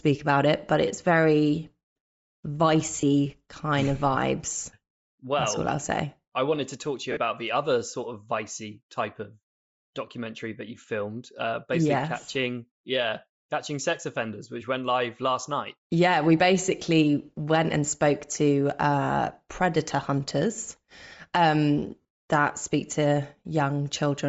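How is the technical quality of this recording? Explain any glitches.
The speech carries audible codec damage throughout, plus four brief dropouts where the sound smears rather than cutting to silence.

Bluetooth LC3 compression likely explains the constant breathy, grainy edge. The upper spectrum is thinned and refilled with noise. That texture, steady rather than bursty, fits a low bitrate near 32 kbps with 10 ms frames. Ordinary hiss or band-limiting would lack the grain.

Lost LE Audio frames occur at 3.01–3.03 s before "kind of vibes", at 5.43 s before "all I'll say I", at 7.12–7.17 s between "to talk to you" and "the other sort of", and at 22.01–22.05 s, where the losses are scattered over 80 ms and the longest run is about 40 ms. The decoder repeats the last spectrum with scrambled phase, so each gap becomes a noisy smear. A plain dropout would click or go silent instead.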